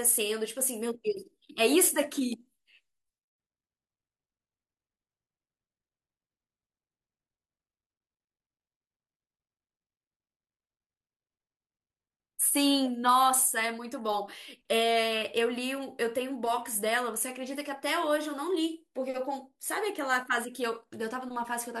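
From 13.36 s to the end, the resampler restarted on every block: 40 ms blocks converted separately, each edge carrying an error, producing a 25 Hz buzz under the speech.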